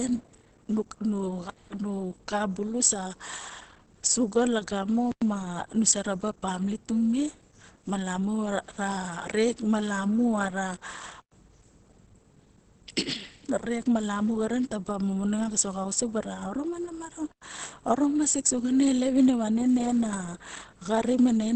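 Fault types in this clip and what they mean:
Opus compression: Throughout, the speech sounds muffled and hoarse, with clearly audible coding damage and nothing above 8.5 kHz. This is likely Opus at a low bitrate, perhaps around 16 kbps, where the encoder drops into its SILK speech mode and limits the audio to wideband.
Gap between chunks: At 5.12, 11.22 and 17.32 s there are 100 ms holes of silence, 6.1 seconds apart. The audio arrived in 6-second chunks and a silent space was left at each join. No sound is missing, but the flow breaks each time.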